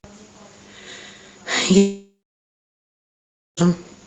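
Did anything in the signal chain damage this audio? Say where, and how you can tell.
Yes, a long network dropout runs from 1.77 s to 3.59 s, likely caused by the stream stopping in transit. At 1.77 s the receiver's concealment stretches the last sound into a fading buzz. Within a few tenths of a second this decays into about 1.45 s of silence. Sound returns at 3.59 s with roughly 1.8 s simply missing. Through the Opus call path, the audio reaching us is limited to about 8 kHz.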